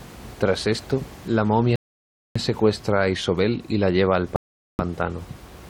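At 1.76 s the speech stops dead after "la momia" and goes silent until 2.36 s. It picks up with "secuestra a", exactly where it left off. This is a rebuffering stall. The player ran out of downloaded audio and waited for more. Nothing is lost, but about 0.6 s is added. A second stall follows "y la lleva", from 4.36 to 4.79 s, adding about 0.43 s. During both gaps even the faint room noise, about 21 dB below the speech, drops out.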